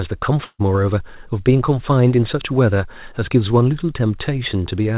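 From 0.44 to 0.62 s, a burst of packet loss: the last sound is stretched and faded for about 150 ms, then goes briefly silent before skipping ahead, unlike a plain silent dropout.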